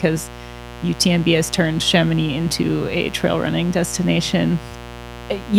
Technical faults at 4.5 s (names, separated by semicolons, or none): mains buzz